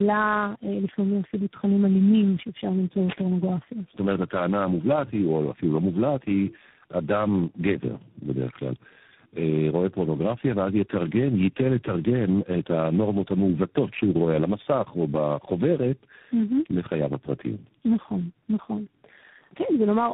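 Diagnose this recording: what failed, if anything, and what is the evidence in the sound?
Codec stage: tandem speech coding throughout. The speech is rough, muffled and warbly, pointing to three speech coders in a row, each re-coding the last one's damage. The spectrogram is empty above 3.8 kHz.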